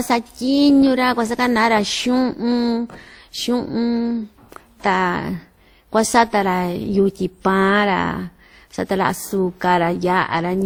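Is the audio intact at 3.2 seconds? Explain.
No. At 3.2 s the speech carries two layers of codec artefacts heard together. This is likely transcoding between lossy codecs, consistent with Opus and then WMA re-encoding the earlier damage.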